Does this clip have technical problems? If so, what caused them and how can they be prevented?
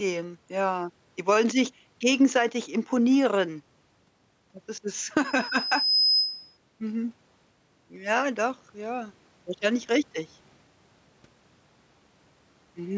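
Yes. Gain pumping runs through the whole clip. The gain swings by roughly 5 dB. The likely cause is input gain set far too high, with a fast limiter clamping every peak. Lowering the microphone gain prevents it.

A loudspeaker feedback squeal runs from 5.24 to 6.58 s. A single 5.1 kHz tone grows over most of a second until it is roughly as loud as the speech. The microphone is hearing its own loudspeaker, and the loop gain exceeds one there. Headphones or more distance prevents it.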